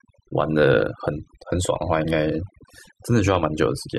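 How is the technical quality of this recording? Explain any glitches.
The recording's technical quality is poor, with one fault running through the whole clip: overdone noise removal. The noise reducer was pushed too hard, cutting frequency bands near its noise estimate and softer parts of the speech along with them. The background drops and breaks up into twinkling specks. Unlike a band-limited or low-bitrate file, the top end isn't simply missing.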